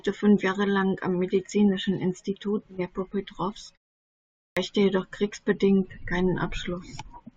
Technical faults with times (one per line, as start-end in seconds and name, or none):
4.37-4.57 clipped start after a pause